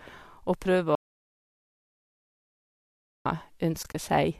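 From 0.95 to 3.26 s the speech stops dead and about 2.3 s of audio dropout to silence follows, with no room tone at all. On a waveform this is a flat line; a spectrogram shows a solid black band. The likely cause is a lost input, with the recorder writing zeros throughout.

Between 3.83 and 3.95 s comes AAC frame loss with muting: about 60 ms of sound is missing, scattered across 120 ms in short holes, the longest around 30 ms. Each hole fades out and back in, giving tapered dips in the waveform and soft-edged vertical gaps on a spectrogram, which fits lost 10 ms frames of the low-delay codec.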